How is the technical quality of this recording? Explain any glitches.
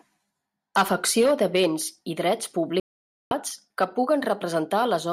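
The speech has one clear glitch. A digital broadcast dropout from 2.80 to 3.32 s: the receiver lost valid frames and muted for about half a second. Unlike an edit, it leaves a silent gap; the speech resumes further along, so that stretch is simply missing.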